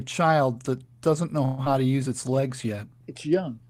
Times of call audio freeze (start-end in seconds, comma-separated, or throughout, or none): 1.45-1.61